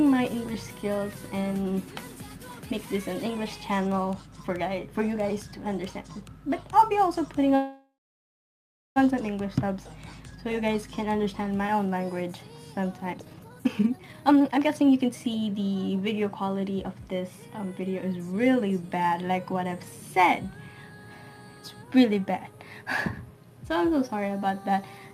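At 7.55 s the audio stops moving forward and holds for about 1.4 s, until 8.98 s. This is a call audio freeze. The last bit of sound carries on as a fading buzz or hiss. Then it drops away, and about 1.06 s of that span is silent. The likely cause is packets held up in transit, which let the jitter buffer run dry. When the audio returns, it resumes exactly where it stopped. Nothing is lost. The sound is simply pushed about 1.4 s later.

From 13.14 s to 15.90 s there is a jitter buffer speed-up. The receiver was holding more audio than it aims for. To work it off, it cut many short slices, one or a few pitch periods each, in quick succession. Roughly a second and a half was removed. The audio plays at about 151% speed while the pitch stays the same. It sounds rushed and clipped along until normal pacing returns.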